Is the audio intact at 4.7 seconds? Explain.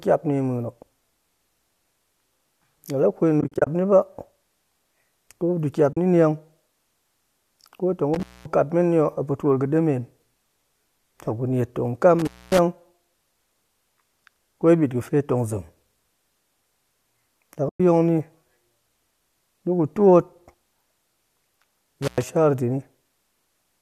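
Yes, the audio is intact at 4.7 seconds, with no fault audible at that moment.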